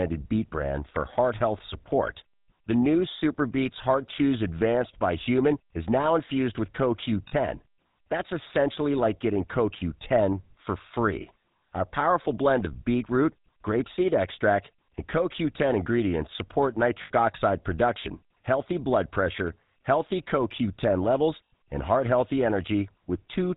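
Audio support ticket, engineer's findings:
GSM full-rate codec, whole clip: speech band-limited, nothing above 4 kHz, with plainly audible buzzy, gravelly roughness. Fits GSM full rate at 13 kbps. Cause: vocal-tract model driven by a regular pulse train, excitation kept at one sample in three. Distinguish from a plain low-pass or narrowband channel: those only dull the sound, while this adds grain and buzz on voiced sound.

Lost GSM frames at 7.28–7.33 s, 17.02–17.11 s and 21.46–21.51 s: sound briefly held as a rough, metallic ring, not a gap. Lengths fit two, four and four lost 20 ms frames. Mechanism: concealment replays the last good frame's settings. Distinguish from a dropout or mute: no silence here, just the stuck, ringing tone.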